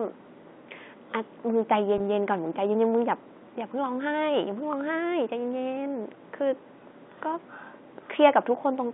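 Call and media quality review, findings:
Packet loss with pitch repetition, 1.98–2.00 s in speech: brief held, buzzy sound where about 20 ms went missing. Receiver repeated the last pitch period, so there's no silent dropout gap. G.711 band-limited line audio is unaffected.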